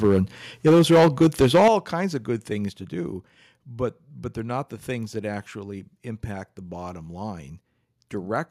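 From 0.03 to 0.18 s the speech peaks are flattened, likely microphone overload with input gain driving the converter about 4 dB past full scale and clipping roughly 7% of samples. A harsher stretch follows from 0.66 to 1.7 s, ending just before "kinds of good", with peaks about 10 dB over and around 15% clipped, giving a gritty, crackling edge.

Sudden level drops land at 0.69 s (about 2 dB), 1.68 s (about 8 dB, before "kinds of good") and 2.7 s (about 4 dB, between "kinds of good" and "to do but but"). These are likely the microphone volume being stepped down by software reacting to clipping, with voice and background falling together.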